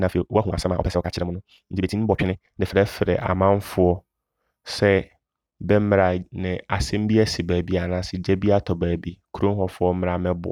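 A speech clip with a time-stretched section from the start to 2.74 s. Over that stretch the pace runs at twice normal speed while the pitch stays put. It sounds rushed. Software likely squeezed the audio by dropping short pieces to fit a shorter length.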